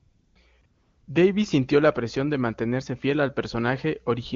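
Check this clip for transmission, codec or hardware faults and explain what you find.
One fault is present: AMR comfort noise at 0.00–0.35 s, 0.61–0.63 s and 0.65–1.07 s. In those stretches the real background gives way to a smooth, steady hiss that switches abruptly in and out. The phone judged the talker silent, stopped sending speech frames, and the receiver synthesised noise from a rough level-and-spectrum description. The wideband HD Voice coding heard elsewhere sounds clean, which fits its highest rate.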